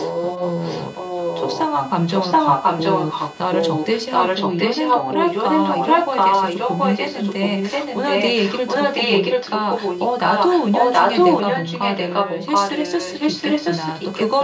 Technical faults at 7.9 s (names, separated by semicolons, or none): computer activity noise; echo leak